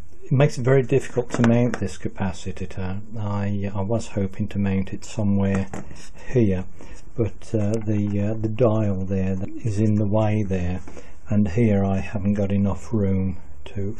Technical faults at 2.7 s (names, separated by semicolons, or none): repeated frames